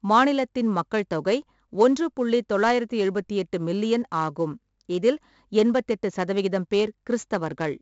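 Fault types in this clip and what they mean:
4-bit ADPCM compression: every sample is a coarse 4-bit step off a prediction, so the speech carries a heavy, gritty hiss that swells with its loudness and roughens sharp onsets. At 64 kbps there's nothing above 7.7 kHz, which fits a 16 kHz rate, so it's dull too.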